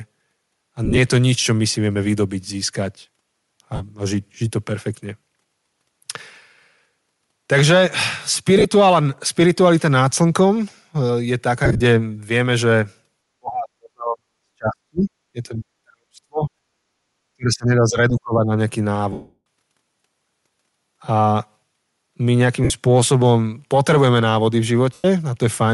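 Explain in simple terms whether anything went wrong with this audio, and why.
Several things went wrong. Throughout the clip the speech has a breathy, grainy edge with hissy, noise-like highs. This is most likely Bluetooth LC3 compression, where the codec drops fine high-frequency detail and fills the gap with noise. Unlike the faults below, it never comes and goes.

There are lost LE Audio frames at 0.85, 3.75, 8.58, 11.65, 19.12, 22.64 and 24.93 s. Each is a brief noisy smear where the decoder repeats scrambled copies of the last sound. The one at 19.12 s lasts about a third of a second and fades toward silence.

Speech suppressed in double talk appears from 13.3 to 15.1 s, 15.3 to 16.5 s and 17.3 to 18.5 s. The voice sinks or breaks up for a second or more. The likely cause is the echo canceller turning down both the talker and the loudspeaker echo while both sides talked. These dips are longer than the smears from lost frames.

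Background gated by the echo canceller happens from 16.78 to 16.96 s. For about a fifth of a second the room sound itself drops away, then returns when the canceller lets go.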